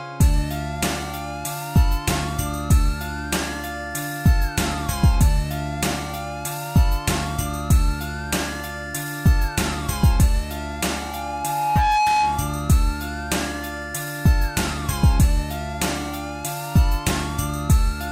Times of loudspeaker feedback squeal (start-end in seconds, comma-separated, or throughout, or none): 10.92-12.67